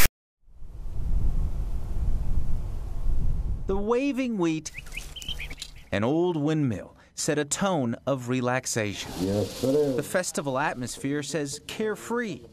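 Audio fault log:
0.00 to 0.06 s, file tags played as audio: the clip opens with a short hard-edged burst of loud rasp offset to one side, then drops to dead silence before the sound begins. A block of text tags is being read as samples, and the character bytes produce the lopsided rasp. The zero padding that follows decodes as silence. That offset rasp followed by silence sets it apart from a start-up click or a codec glitch.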